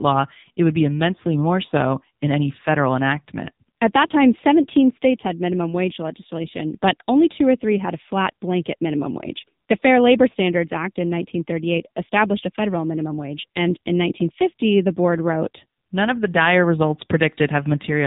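Speech runs through the AMR narrowband mobile codec from start to finish, at a low bit rate that fits the 6.7 kbps mode. Its few-pulse vocal tract model leaves the voice heavily damaged, buzzy and synthetic, with nothing above 3.8 kHz.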